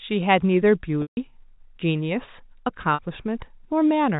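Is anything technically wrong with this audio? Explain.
Yes. Packet loss with pitch repetition occurs at 1.02–1.17 s (150 ms) and at 2.94–2.99 s (50 ms). The receiver loops the last pitch period to bridge each gap. This gives a held, buzzy tone that fades, where a plain dropout would give abrupt silence.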